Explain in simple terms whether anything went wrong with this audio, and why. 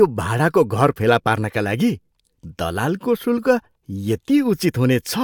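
Nothing went wrong with this audio, so there is no problem to explain.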